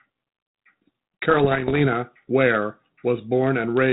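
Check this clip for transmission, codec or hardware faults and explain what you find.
One transmission fault is present: bit errors on an ADPCM link, from 1.30 s to 1.87 s. The speech underneath is G.726 ADPCM audio, cut off above 4 kHz with light coding hiss consistent with 32 kbit/s.

During that stretch, a few bits in every thousand are corrupted. Each flipped bit misleads the decoder's adaptive step size and predictor, so the error doesn't stay a single click. It rings for several milliseconds while the decoder recovers. The result is scattered pops and short, rough, gritty bursts with brief jumps in loudness. On a waveform these show as sudden spikes and small clusters of oversized samples. On a spectrogram they appear as thin vertical broadband streaks reaching up to the 4 kHz ceiling.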